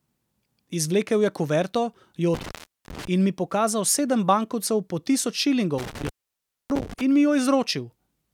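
At 2.34 s and again at 5.78 s the speech drops out through an intermittent contact, a loose plug or cable briefly losing connection. The first disturbance runs to 3.07 s with the line open for about 0.40 s. The second lasts until 7.01 s, open for about 0.61 s. Each break is bracketed by crackle as the contact opens and recloses, and faint hiss remains while the circuit is open.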